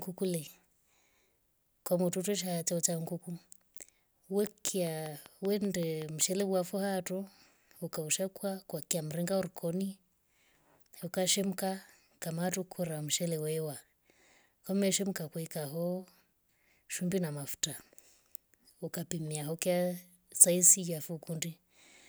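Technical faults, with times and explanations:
4.47–6.42 s, train of clicks: likely interference or a struggling interface injects a pulse about 5.2 times per second, regular as a clock, giving around ten similar ticks roughly 10 dB above the speech, audible through pauses, ending just before "wafwa tuu ukaushaukwa kwa".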